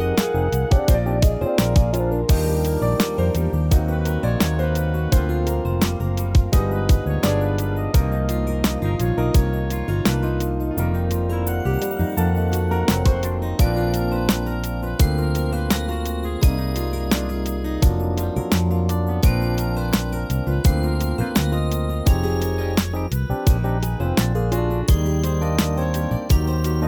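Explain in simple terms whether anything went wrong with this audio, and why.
Nothing went wrong with this recording: the signal stays steady and intact the whole way, with no technical problems to point to at any moment.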